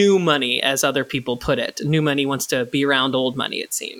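Nothing in the speech stood out as a technical problem on listening.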